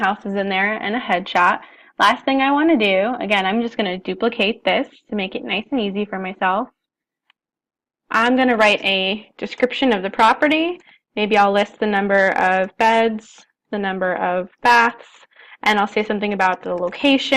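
Listening through the recording, nothing stood out as a technical fault at any point.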